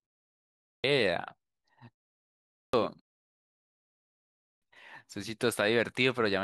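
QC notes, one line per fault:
0.35–0.84, 2.24–2.74, 4.12–4.62 s, clipped start after a pause: each time sound resumes after a silence of 0.35 to 1.19 s, roughly half a second is swallowed while the output device wakes and relocks, so speech bursts in abruptly mid-onset. Unlike muted pauses, which only drop the background, actual speech is lost here.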